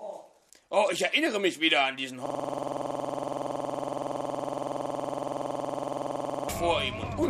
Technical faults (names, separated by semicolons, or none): system hang loop